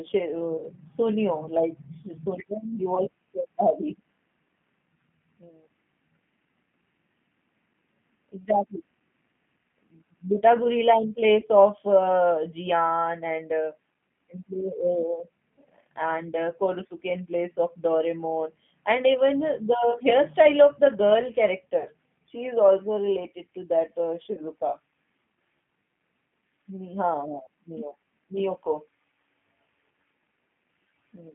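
It's a speech clip squeezed through a G.729 codec the whole way through. The band sits at roughly 150 Hz to 3.4 kHz, and at 8 kbit/s the pulse-based excitation gives the voice a plainly rough, slightly synthetic edge. There's also VoIP packet loss concealed by the speech codec at 0.58–0.65, 2.95–3.00, 11.40–11.45, 21.79–21.88, 24.33–24.41 and 27.45–27.47 s. The decoder stretches the last sound into a fading buzzy tone or coloured noise over gaps of 20 to 60 ms, and the voice stays weak or distorted for tens of milliseconds afterwards.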